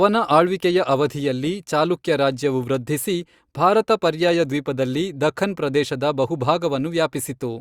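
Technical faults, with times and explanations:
Nothing stood out on listening to this speech recording.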